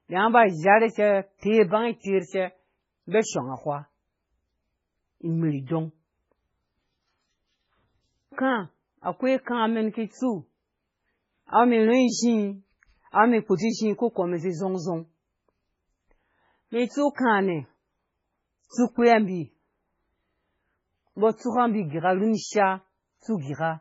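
Throughout the speech, MP3 compression damage is heavy. Nothing survives above 7.6 kHz, so the top end is cut flat. Weak frequency lines drop in and out between frames, giving a watery, swirling texture and metallic chirps on s sounds. A starved bitrate near 16 kbps is the likely cause.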